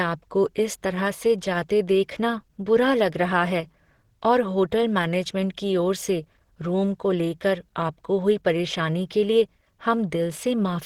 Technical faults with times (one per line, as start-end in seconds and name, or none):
0.00-10.86 Opus compression